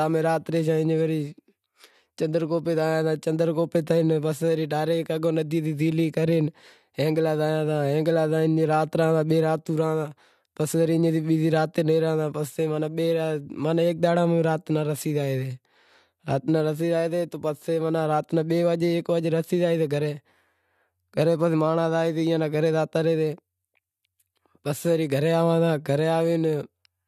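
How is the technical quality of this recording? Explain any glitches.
There are no glitches to explain in this recording's technical quality.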